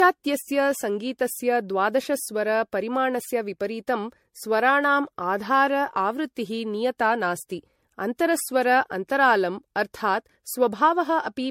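Throughout, generation loss sounds swirly, hollow and smeared, likely from about five MP3 passes near 64 kbit/s. The spectrogram shows holes and nothing above 16.5 kHz.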